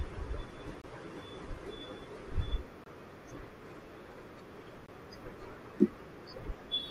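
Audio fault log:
0.82–0.84 s, 2.84–2.86 s and 4.86–4.89 s: gap between chunks. The speech drops into a hard-edged hole of about 23 ms, three times, spaced exactly 2.0 s apart. That regular spacing suggests the audio arrives in 2-second blocks with a short stretch of silence padded or left before each new block plays. Nothing is missing; the flow just stalls briefly at each join, which sounds like a tiny, clean stutter.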